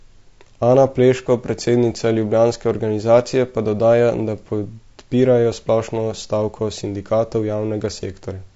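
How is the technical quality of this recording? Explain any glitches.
The speech is clearly degraded by compression. Throughout, it likely passed through low-delay AAC compression (AAC-ELD), whose short frames capture voice harmonics poorly; starved of bits, which fits roughly 32 kbps, the voice turns rough and grainy, with noise filling between harmonics and a thinned, artificial-sounding top band.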